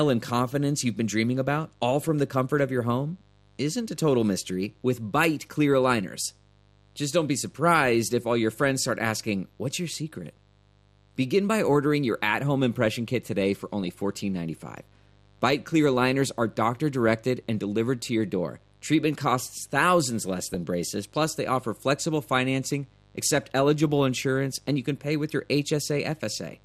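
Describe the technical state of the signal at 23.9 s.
At 23.87 s, between "offer flexible financing accept" and "insurance and you can", weak DAB reception lets bit errors, at a rate of a fraction of a percent, slip past error correction into the MP2 data. Corrupted samples and scale factors throw individual sub-bands to the wrong level, which points to a couple of damaged frames. The result is DAB burbling: a brief burble lying over the speech.

Underneath, the audio carries MP2 compression. The bit allocation is too sparse for the material, which fits a rate of around 80 kbps, so upper sub-bands are dropped outright and the remaining bands are coarsely quantised, with bands switching in and out from frame to frame. The likely cause is a low-rate Layer II encode. Around this moment the speech sounds dull and carries a plainly audible gurgling, granular distortion.

A mains buzz also runs through this point. 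Switching spikes from a dimmer, rectifier or poorly shielded path enter twice per 50 Hz cycle, and their harmonics stack up into the kilohertz range. This produces a steady, raspy buzz sitting about 35 dB below the speech level.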